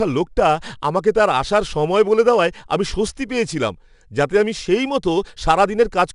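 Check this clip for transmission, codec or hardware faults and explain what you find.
One codec fault runs through the whole speech clip: 4-bit ADPCM compression. Each sample is coded as a 4-bit step from a predicted value, with the step size adapting as the signal changes, so the quantisation error becomes broadband noise that rises and falls with the level. The damage is plainly audible as a gritty hiss riding on louder passages, with roughness on sharp onsets. Nothing is present above 10.7 kHz, which fits a stream of about 89 kbps.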